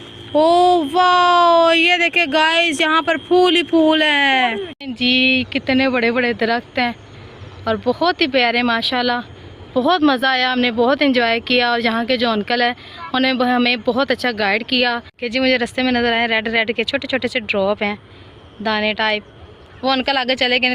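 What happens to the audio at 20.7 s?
Nothing goes wrong at 20.7 s; the audio is intact at that moment.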